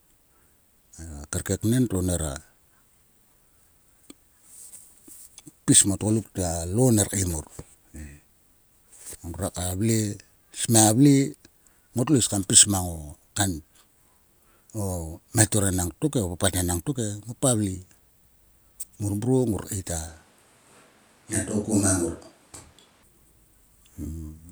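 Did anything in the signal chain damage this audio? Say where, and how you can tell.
Yes, at the capture stage. From 20.08 to 23.03 s, right after "ngor keit a", the speech turns roomy and hollow, drops by about 5 dB, and gains room noise around 35 dB below the speech. The abrupt change and return likely reflect a switch to a distant microphone.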